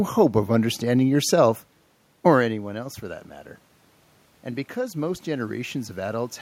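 From 4.74 to 6.37 s the automatic gain is rising. The input dropped by about 12 dB, and the gain control slowly added about 3 dB, lifting the speech and room noise together. The waveform envelope and noise floor climb in step, and a spectrogram brightens evenly across bands.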